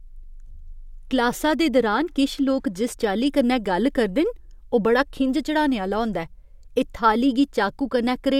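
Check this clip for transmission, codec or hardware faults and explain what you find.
No faults found.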